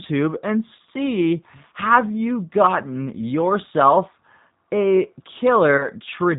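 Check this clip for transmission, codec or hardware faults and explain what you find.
Two faults can be heard: a low-bitrate speech codec across the whole clip, and two brief dropouts patched over by that codec.

The speech passes through a G.729 codec at 8 kbit/s, apparently the G.729A variant. Rather than sending the waveform, the encoder transmits a vocal tract filter, a pitch predictor and a few pulses per short frame, and the decoder rebuilds speech from these. Nothing above 4 kHz survives, so the voice sounds narrowband and dull, with a plainly audible rough, slightly synthetic texture.

VoIP packet loss concealed by the speech codec occurs twice, at 0.77 to 0.80 s and at 5.77 to 5.89 s. Each gap fits a single lost 20 ms packet. Missing frames force the decoder to keep extending its last pitch and filter at falling gain, so the sound smears into a short buzzy tone or coloured noise that fades. 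At 5.77 s the disturbance lasts about 0.12 s, because each rebuilt frame depends on the one before and the speech takes time to recover.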